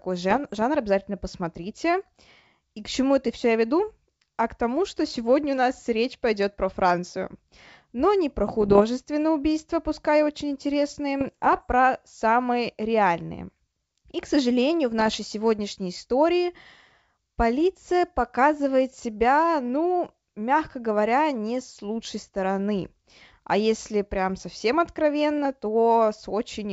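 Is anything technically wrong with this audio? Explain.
Yes. Bit errors on an ADPCM link hit the speech at 0.31–0.63 s (before "обязательно посмотрите"), 8.61–8.82 s (between "не про" and "убийства пускай очень"), 11.20–11.63 s (before "самые реальные") and 14.99–15.16 s. Flipped bits, at a fraction of a percent, throw off the decoder's step size and predictor, so each burst rings on as pops, rough grit and brief level jumps over the clear wideband G.722 sound.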